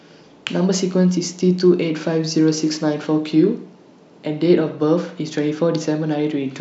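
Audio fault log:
4.26 to 6.20 s, channel delay (comb filtering): the speech turns dull and thin at the top, with its brightest detail muted. One channel runs a couple of samples late, a tiny fraction of a millisecond, so the mono sum cancels high frequencies from around 10 kHz.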